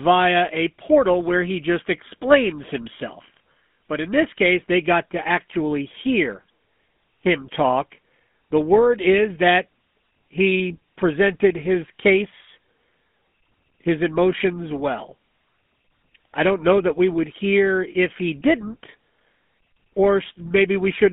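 A speech recording carrying GSM full-rate codec damage from start to finish, and it is plainly audible: a buzzy, gravelly roughness rides on every voiced stretch, and the band is confined to roughly 200 Hz to 3.5 kHz, which fits the old 13 kbps GSM coder. What separates it from a simple telephone-band filter is that grainy buzz, from the coarse pulse-train excitation that rebuilds the voice with regularly spaced pulses instead of its real waveform.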